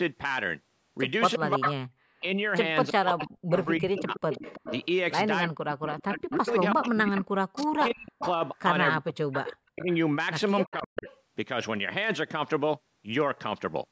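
From 1.37 to 4.25 s and again from 5.45 to 11.07 s, the speech dips and breaks up in pieces, falling by around 40 dB at its deepest, for roughly 1.5 s and 3 s in total. This is likely speech suppressed in double talk: the echo canceller, unable to separate local talk from loudspeaker echo, attenuated both.

From 1.67 to 4.86 s and 5.93 to 9.56 s, a copy of the speech trails 326 ms behind at about 10 dB down, with a fainter scrap, about 25 dB down, at 10.66 to 11.18 s. This is likely echo leak, where loudspeaker pickup escaped cancellation.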